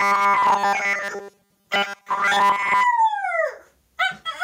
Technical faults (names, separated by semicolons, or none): gain pumping; robotic sound from repeated short buffers